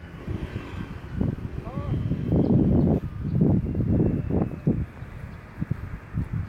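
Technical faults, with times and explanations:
Nothing here needs flagging: I listened through the whole clip and heard no technical faults at any point.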